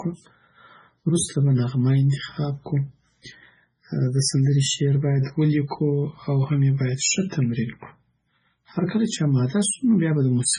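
MP3 compression damage runs through the entire recording, and it is heavy. The speech has nothing above 10.5 kHz, a hard treble ceiling. The audio also carries a watery, swirling texture, metallic chirps on sibilants, and smeared consonant onsets. These are the signature of a likely MP3 encode at a very low bitrate, probably around 16 kbps. Starved of bits, the encoder cut the top band outright and dropped quieter frequency lines, which flicker on and off from frame to frame.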